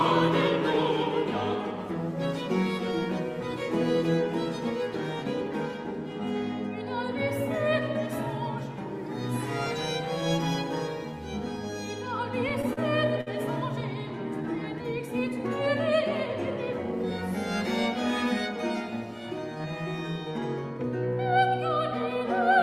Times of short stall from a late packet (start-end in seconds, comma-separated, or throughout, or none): 12.73-12.79, 13.21-13.28